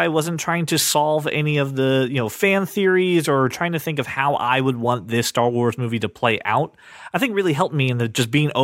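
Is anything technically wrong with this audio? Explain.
No, nothing technically wrong can be heard here.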